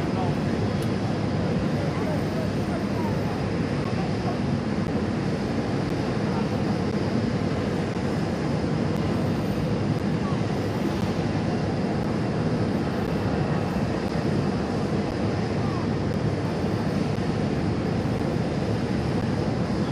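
From 3.84 s to 19.22 s, periodic USB or driver dropouts occur every 1.024 s, about fifteen in all. Each time, roughly 10 ms of audio is lost and replaced by silence. Something is stalling the driver or bus on a fixed schedule. It is heard as regular ticks.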